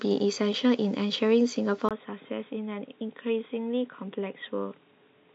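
At 1.89 s the speech breaks for about 20 ms and then continues through to the end of the clip in a duller, boxier tone, with nothing above 3.8 kHz, a drop in level of roughly 5 dB, and a new background noise sitting roughly 35 dB below the signal. The input was likely switched to a poorer device at that point, such as a different microphone or a headset's call profile, whose narrower band and own noise floor replace the original capture.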